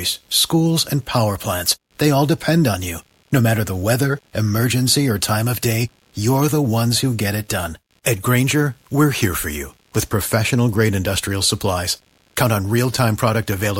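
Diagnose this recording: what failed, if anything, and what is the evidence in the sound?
Analogue wiring: computer activity noise throughout, a buzz pulsing near 70 Hz about 40 dB under the speech. Processor load disturbs the shared ground, unlike steady mains hum.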